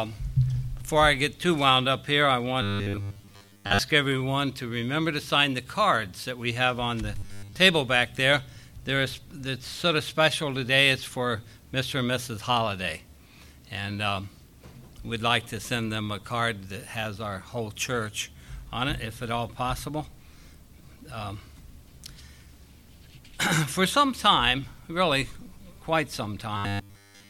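Robotic sound from repeated short buffers at 2.62–3.79 s, 7.18–7.56 s and 26.57 s to the end: a rigid 100 Hz metallic buzz, likely from replayed 10 ms chunks, rather than dropout gaps.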